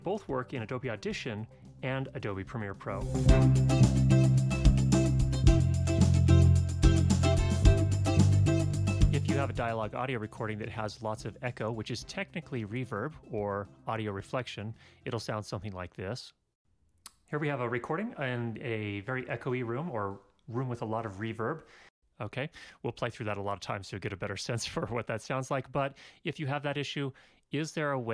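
Nothing stood out on listening to this audio.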